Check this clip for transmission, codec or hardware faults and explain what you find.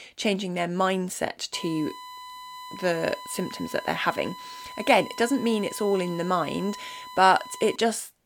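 One hardware fault stands out, USB whine, running from 1.53 s to 7.76 s: a steady 1 kHz tone, roughly 15 dB below the speech, from 1 ms bus frames leaking through power or ground. On a spectrogram it is a flat horizontal line at 1 kHz.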